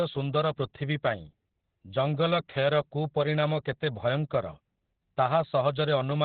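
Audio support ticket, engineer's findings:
Opus voice compression throughout: speech muffled, hoarse, slightly robotic, nothing above 4.6 kHz. Narrowband SILK mode with coarse excitation coding, consistent with about 8 kbps.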